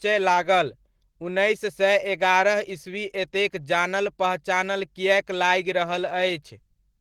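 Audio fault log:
Throughout: Opus voice compression, squeezed to a rate that fits about 16 kbps, coarsens the excitation coding, leaving the speech plainly muffled, hoarse and faintly robotic.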